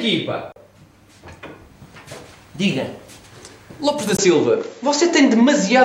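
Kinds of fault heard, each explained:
Input switched to a poorer device: the recording likely jumped to a different, lower-grade microphone path at 4.17 s, after a 20 ms gap. From there the sound loses everything above 7.6 kHz and turns duller, its level shifts by around 5 dB, and a faint new noise floor appears.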